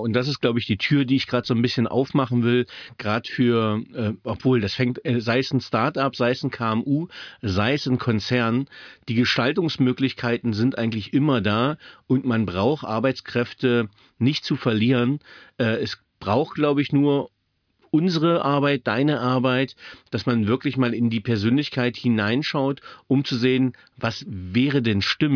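Nothing in this speech recording stood out as a technical problem on listening.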